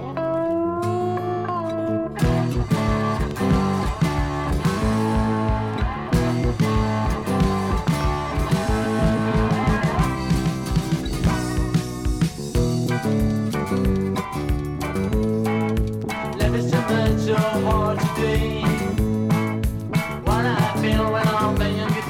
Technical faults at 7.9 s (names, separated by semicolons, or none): loud pop